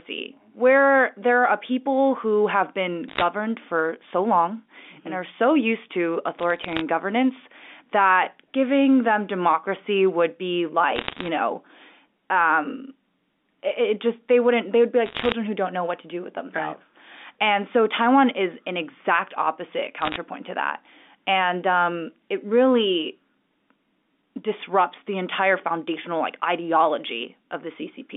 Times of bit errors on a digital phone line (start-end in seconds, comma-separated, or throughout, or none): 3.08-3.22, 6.39-6.81, 10.96-11.28, 15.06-15.32, 20.01-20.16